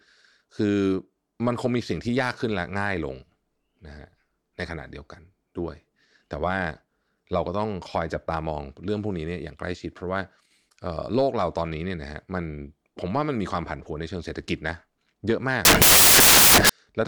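Speech, and for the last stretch, from 15.65 to 16.69 s, it turns into loud, harsh broadband noise for just over a second. That's samples built from the wrong bytes: the reader is stitching each sample together with its bytes misaligned or swapped, so the jittery low-order bits end up driving the big part of the value. Normal audio picks back up after 16.69 s.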